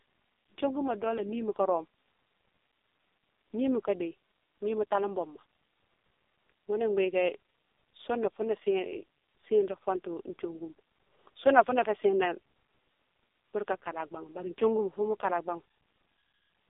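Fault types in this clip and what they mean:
AMR narrowband mobile codec: This is the mobile-phone speech codec used on 2G and 3G networks. It models the vocal tract and drives it with a few pulses per 5 ms. Here the speech runs through the whole clip in a thin band of roughly 300 Hz to 3.6 kHz. Nothing is heard above 3.7 kHz. The coding damage is heavy, with a buzzy, synthetic edge. That fits the lowest bit rate of about 4.75 kbps.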